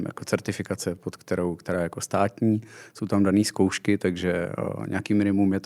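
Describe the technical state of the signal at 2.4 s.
At 2.4 s the speech signal is intact, with no audible dropout, distortion, glitch or other technical fault at that point.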